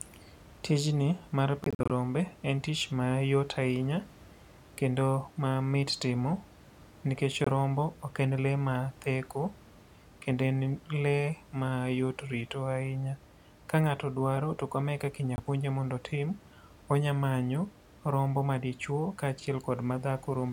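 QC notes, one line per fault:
1.64–1.91 s, 7.44–7.48 s, 15.36–15.40 s (after "to kama e kaka"): Bluetooth dropout, with the first a scattered 256 ms burst of short holes totalling about 128 ms, the others single 21 ms gaps. The cut edges are abrupt or a fade of a few milliseconds, and the speech resumes further on instead of repeating, likely from late wireless packets.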